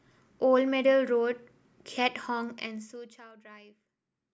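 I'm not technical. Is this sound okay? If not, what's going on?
No. From 2.44 to 3.32 seconds there is zipper noise. The speech gets much quieter there, but not smoothly. The volume drops in many tiny stairs, about thirty each second, and each stair makes a faint click. Together those clicks sound like a fine ticking or a zip being pulled under the voice. It happens because nothing smooths the volume change between steps. A smoothly ramped fade would remove it.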